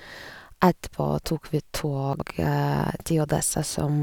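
Speech, with one case of chunks out of order from 2.13 to 2.22 s, just after "tok vi": a 21.33 ms block plays three blocks late. The result is a brief jumbled stutter, shown on a waveform or spectrogram as three hard vertical seams where the sound jumps discontinuously.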